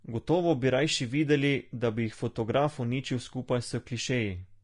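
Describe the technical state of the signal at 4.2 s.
At 4.2 s the signal has likely passed through low-bitrate Vorbis compression, whose damage runs through the whole clip. The encoder coded a smooth spectral floor and then quantised the detail above it so coarsely that much of that detail became noise of similar energy. The result fits a bitrate around 35 kbps. Nothing remains above 10.6 kHz, and the codec damage is plainly audible as a hissy, grainy texture over the speech, with roughened tones and blurred attacks.

The same moment also falls inside a run of clock slip clicks lasting from 0.16 s to 4.58 s. Their likely cause is two devices running on separate, unsynchronised clocks that differ by something like 150 ppm. Each time that mismatch adds up to a full sample, one sample is dropped or repeated. This happens about every 0.15 s, around thirty times across the span, and each slip is heard as a small regular tick.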